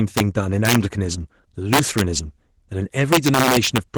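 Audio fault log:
Throughout: Opus voice compression. The speech is muffled, slightly hoarse and faintly robotic, with plainly audible coding damage. The lower band is built from coarse linear-prediction excitation, and a thinner transform layer carries content above 8 kHz, which fits a bitrate near 16 kbps in hybrid mode. On a spectrogram, energy reaches about 20.2 kHz with nothing above. Harmonics look smeared, and the upper band looks blotchy in 20 ms blocks.
0.17–0.20 s, 0.65–0.76 s, 1.73–2.01 s, 3.13–3.98 s: integer overflow. At these loud stretches the level overshoots the integer limit by about 4, 6, 3 and 4 dB. Instead of being held at full scale, each excess peak wraps to the opposite sign, producing violent cracks far harsher than clipping. The last run continues to the end. On the waveform, peaks jump from one rail straight to the other. A spectrogram shows bright broadband vertical streaks.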